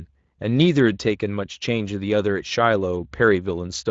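No technical faults are audible.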